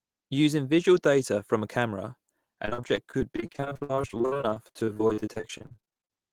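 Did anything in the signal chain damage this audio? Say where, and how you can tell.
Yes, at the network stage: repeated packet loss (robotic sound) from 2.65 s to 6.13 s, with dozens of short dropouts up to 62 ms each. Concealment stretches the last sound across each hole, so about 39% is patched, leaving choppy speech with pieces missing.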